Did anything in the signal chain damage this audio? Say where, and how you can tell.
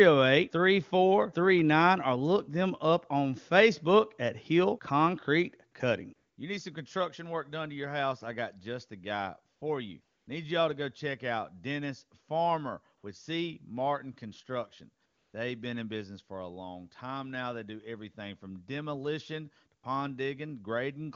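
Yes. The damage is in call processing at the codec stage: AMR comfort noise fills seven short pauses. They fall at 5.71 s, 6.15–6.37 s, 9.55–9.61 s, 10.01–10.27 s, 12.97–13.03 s, 15.05–15.33 s and 19.81 s, and last from 20 to 280 ms. In each one the real background drops out and a smooth, steady synthetic hiss takes its place, then switches back abruptly. The sender's voice activity detector judged those moments silent and stopped sending speech frames. The receiver then generated noise from a rough level and spectrum description. The wideband speech around these gaps sounds clear.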